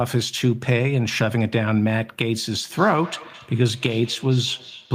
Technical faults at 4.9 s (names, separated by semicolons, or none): feedback echo between two devices